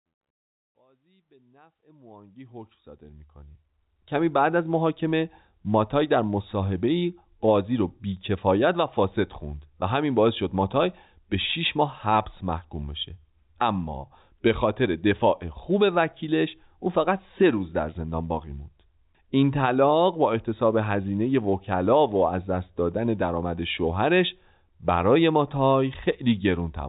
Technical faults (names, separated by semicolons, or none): none